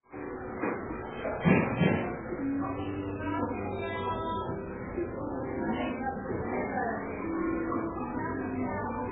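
From start to finish there's heavy, watery swirl and nothing above 3.7 kHz, which is likely MP3 compression at a very starved bitrate, around 8 kbps.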